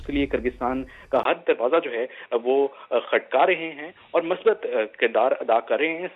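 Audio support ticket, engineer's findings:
Input likely switched to a poorer device at 1.23 s, with a brief dropout of about 20 ms at the handover. From there to the end the band is cut off at 3.8 kHz, so the sound turns dull and boxy. A new, faint noise floor sits well beneath the signal. Level stays essentially unchanged across the switch.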